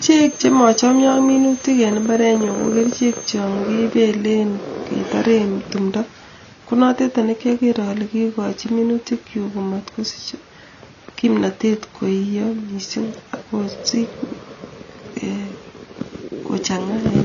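Across the whole speech clip, the signal was most likely passed through one lossy codec and then re-encoded by another, a case of transcoding between lossy codecs. The second encoder spends its bits reproducing the first one's artefacts and layers its own on top. Nothing survives above 7 kHz, so the speech sounds dull. The mix of artefacts fits a low-rate AAC stage followed by WMA at a higher rate.

From 0.0 to 3.45 s, a loudspeaker feeding back into the microphone holds the loop just at the edge of oscillation, the likely source of a feedback whistle. One tone at 6.3 kHz keeps ringing without building up. It sits well below the speech as a thin, steady whistle in the background, swelling and fading slowly in level until it stops at 3.45 s.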